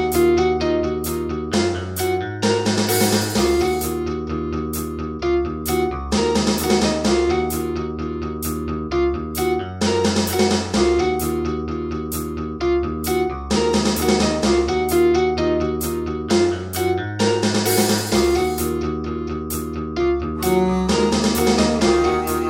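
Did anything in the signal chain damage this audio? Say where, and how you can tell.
No, nothing in the signal chain damaged this audio.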